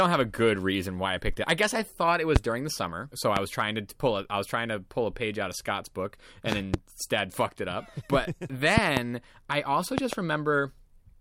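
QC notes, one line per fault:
2.36–2.38, 3.37–3.39, 6.52–6.76, 8.78–8.99 and 9.98–10.15 s, loud pop: sharp pops jump out around 20 dB above the speech, which carries on underneath. The first comes between "guess I thought it" and "during the summer so", and the last three are double pops, the last two around "I also". Most likely a voltage spike from a plug, switch, static or driver glitch.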